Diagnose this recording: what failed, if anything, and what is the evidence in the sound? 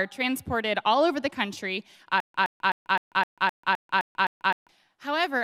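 From 2.20 s to 4.69 s the playback stalls into a stutter with silent gaps. A 117 ms fragment repeats nine times, each followed by about 141 ms of digital silence, giving a steady 258 ms cycle. On a waveform this looks like identical blocks separated by flat lines, and on a spectrogram the same pattern recurs between blank vertical bands. The likely cause is a starved playback buffer that replays its last fragment on each retry, so the audio that should have played in that span is lost.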